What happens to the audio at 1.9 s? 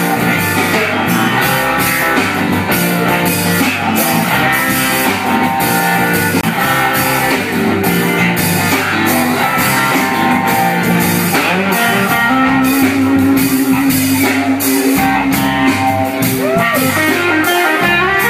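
Nothing goes wrong at 1.9 s: the audio plays through that moment intact, with no dropout, click, distortion or other fault.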